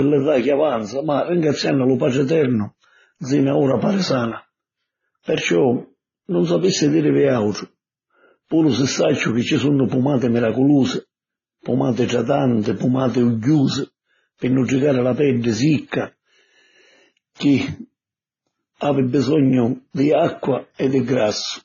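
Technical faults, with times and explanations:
Throughout, transcoding between lossy codecs: the speech was likely re-encoded at low bitrates several times, leaving nothing above 6.9 kHz and each stage's artefacts layered together.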